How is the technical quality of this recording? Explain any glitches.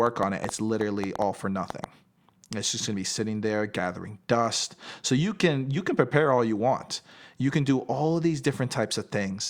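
One glitch affects the recording. From 0.07 to 1.85 s there is a train of clicks: about ten irregularly spaced pops, roughly five per second and around 10 dB above the speech. The likely cause is interference or a faulty connection or power supply.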